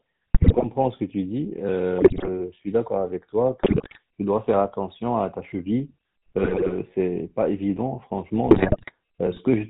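GSM full-rate codec damage runs through the whole clip. The speech has been squeezed through the original GSM coder, which models the vocal tract as a filter and drives it with a sparse, regularly spaced pulse train instead of the real excitation. Everything above 4 kHz is gone, so the speech sounds dull and narrow. The coarse excitation gives it a plainly audible buzzy, gravelly edge, consistent with the 13 kbps full-rate mode.

GSM bit errors break in at 0.34 to 0.65 s, 1.98 to 2.29 s, 3.60 to 3.99 s, 6.38 to 6.75 s and 8.50 to 8.94 s. Each burst lasts about a third to nearly half a second. In each one, corrupted filter, pitch and gain parameters reach the decoder, as on a weak radio link with a high error rate, probably several percent. The spectrum warps and the level jumps frame by frame, so the speech dissolves into squawks, pops and gargling before recovering.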